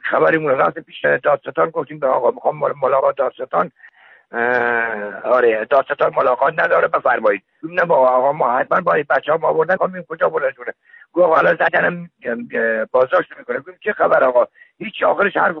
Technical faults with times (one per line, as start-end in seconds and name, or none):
0.00-15.60 MP3 compression
1.03 compressed frames skipped
2.99 compressed frames skipped
7.62 compressed frames skipped
9.76 compressed frames skipped
11.67 compressed frames skipped